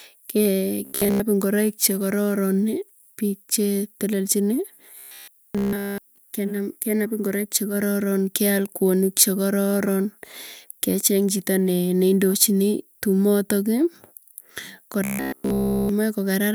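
Three stretches of the speech go robotic, at 0.85 to 1.20 s, 4.99 to 6.18 s (ending right before "kenap ingoroik chekororon keal"), and 15.04 to 15.89 s. Each time the voice locks onto a rigid, metallic buzz at 66.8 Hz while loosely tracking the words. That's likely robotic sound from repeated short buffers, with a roughly 15 ms chunk looping in place of fresh audio. Most of each of the first two stretches is repeats, and the last is entirely repeats.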